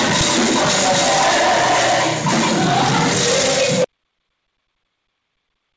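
At 3.84 s the sound stops abruptly and never returns, an audio dropout to silence lasting about 1.9 s to the end. The input was likely lost while recording carried on. The waveform becomes a dead flat line, and the spectrogram goes completely blank, with no room tone, even below the 8 kHz ceiling of the G.722 call path.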